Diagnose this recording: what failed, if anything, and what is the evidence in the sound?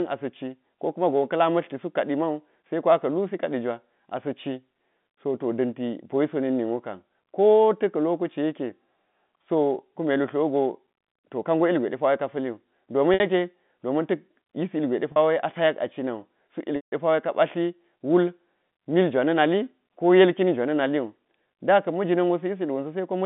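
Packet loss with pitch repetition at 13.14, 15.12 and 16.76 s: network gaps bridged by a repeated pitch period, the 160 ms one fading to silence.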